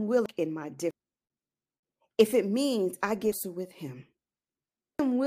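At 0.26 s the speech jumps ahead, with compressed frames skipped: whole blocks of the coded audio never reach the output, so about 0.7 s of material simply vanishes. It happens again at 0.91 s (around half a second lost), 3.32 s and 4.99 s (each about 0.7 s). Each jump spans several 92.9 ms frames.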